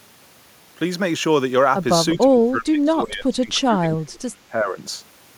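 Speech suppressed in double talk, 2.15 to 4.77 s: the speech sinks by up to about 25 dB, likely an echo canceller ducking overlapping talk.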